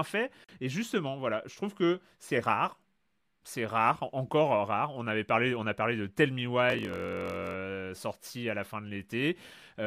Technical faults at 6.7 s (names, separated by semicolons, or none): block size mismatch (padded)